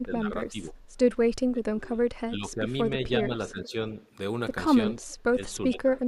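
The speech level repeatedly dips, with speech suppressed in double talk at 0.0–0.3 s, 0.51–0.77 s, 1.51–2.75 s, 2.91–3.86 s and 5.3–5.96 s. The speech sinks by about 10 to 20 dB, deepest in the 1.51–2.75 s stretch. The likely cause is an echo canceller misreading simultaneous talk as echo and attenuating it.

At 5.03–5.15 s an echo leak appears as a very faint copy of the speech, about 35 dB below it and delayed by 394 ms. It is a short scrap, likely loudspeaker pickup that the echo canceller failed to fully remove.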